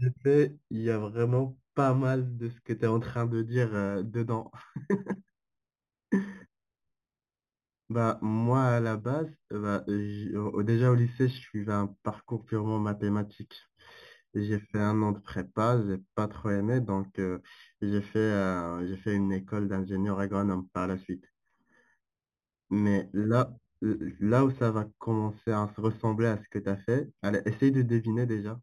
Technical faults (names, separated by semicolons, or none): imaging from linear upsampling